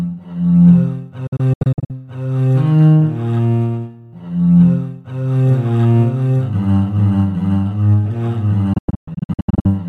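The sound breaks up twice into clusters of short silent holes, each gap snapping shut over about 8 ms rather than fading slowly: first from 1.27 to 1.91 s, where roughly 290 ms of audio vanishes across 620 ms, the longest hole 72 ms, then from 8.73 to 9.68 s, where about 580 ms is lost across 940 ms, the longest hole 120 ms. This is digital broadcast dropout: the receiver muted whenever frames failed, and whatever was transmitted during those holes is gone.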